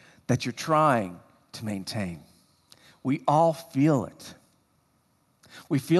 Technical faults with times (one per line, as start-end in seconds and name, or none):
none